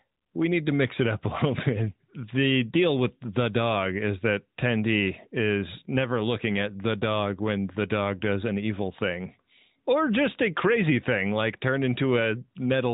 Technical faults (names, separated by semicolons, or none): none